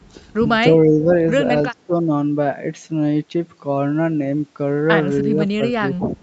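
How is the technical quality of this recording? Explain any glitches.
The speech repeatedly dips, which points to speech suppressed in double talk. It dips at 0.85–1.11 s, 1.71–2.12 s, 5.23–5.41 s, 5.57–5.61 s and 5.97–6.15 s, by about 10 to 15 dB. The likely cause is an echo canceller mistaking overlapping talk for echo and turning the voice down. The sound also stops at 8 kHz, as on a call path.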